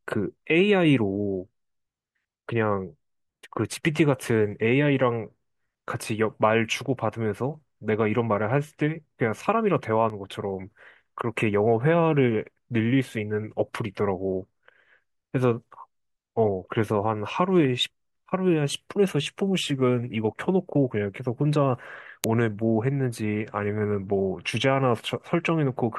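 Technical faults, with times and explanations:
10.1 s, dropped buffer (overrun): The speech jumps abruptly forward, with no gap of silence where the material went missing. Around 10 ms of audio seems to be lost. The likely cause is that the software failed to fetch a block of samples before the hardware overwrote it, so the audio on either side of the lost block is spliced together directly.
22.24 s, uninitialised buffer: A very short, harsh crack cuts in, lasting only about 0.73 ms, which fits a 32-sample block. A buffer was sent to the output before any real audio had been written into it, so whatever values were already sitting in that memory were played as samples. Because those values bear no relation to the surrounding speech, the result is a sharp, loud spike.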